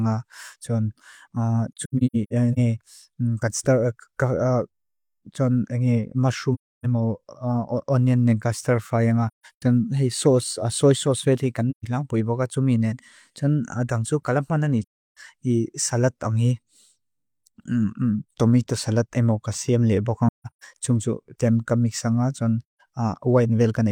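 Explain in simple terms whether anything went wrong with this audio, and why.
Pieces of the compressed stream went missing, and the decoder filled each gap with silence: AAC frame loss with muting. The speech briefly fades into soft-edged holes at 1.73 to 2.58, 6.54 to 6.86, 9.28 to 9.63, 11.70 to 11.85, 14.82 to 15.17, 20.28 to 20.64 and 22.66 to 22.81 seconds.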